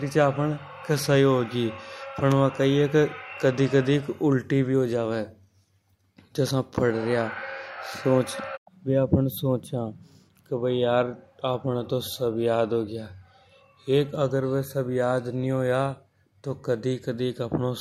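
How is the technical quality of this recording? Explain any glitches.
The recording's signal path holds together without any glitch, dropout or other technical fault to report.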